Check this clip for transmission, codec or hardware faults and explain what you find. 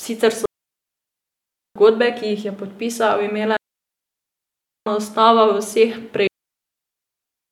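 The speech is interrupted by three digital wireless dropouts, at 0.46 to 1.76 s, 3.57 to 4.87 s, and 6.27 s to the end. Each time, the receiver loses too much data from the link and mutes with a very fast fade. That leaves clean holes of near silence, 1.3 s long for the first two and about 1.25 s for the last, with no noise burst on either side.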